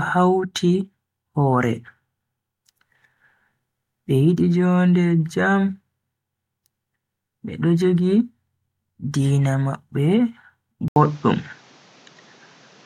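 At 10.88 s, after an 80 ms gap, the speech turns duller and about 5 dB different in level, with a new noise floor. The spectrogram shows nothing above 7.6 kHz, likely from the input switching to a poorer device.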